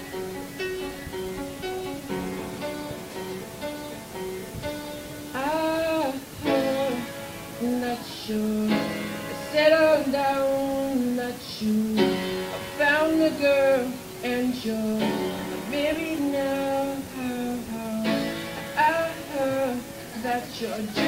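Nothing technically wrong turns up anywhere in this audio, so there's no fault here to point to.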